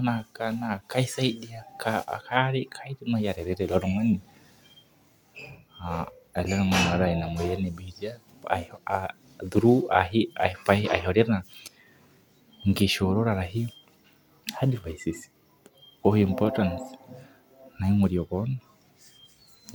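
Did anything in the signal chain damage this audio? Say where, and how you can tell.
No, nothing in the signal chain audibly damaged this speech.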